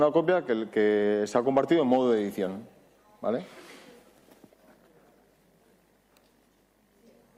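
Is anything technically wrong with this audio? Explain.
Yes. Overlap between stream segments at 2.33 s and 4.33 s: overlapping time stamps on the 2 s segments make the player discard 14 ms and 5 ms of real audio, leaving tiny skips.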